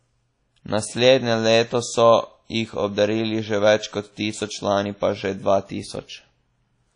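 Throughout the speech, the sound rings and smears, with a washy hiss that swells and fades along with the voice. This points to lossy transform coding, likely WMA compression at a low bitrate, around 32 kbps. The encoder spreads quantisation noise over long blocks lasting tens of milliseconds and drops faint components entirely. On a spectrogram, energy stops at a hard ceiling near 10.1 kHz, and the upper bands look patchy, with holes and blurred onsets.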